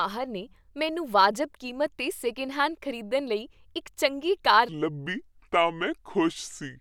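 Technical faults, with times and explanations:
4.69 to 6.81 s, section at the wrong speed: right after "ਇੱਕ ਚੰਗੀ ਕਾਰ" the speech abruptly drops into a deep, dragging register and stays there to the end, running at 0.7 times its proper speed and sounding roughly seven semitones lower. Pitch and tempo fall together, which points to a playback-rate error rather than a pitch effect. This segment was likely played back or resampled against the wrong clock, so it plays out slowly and sounds low.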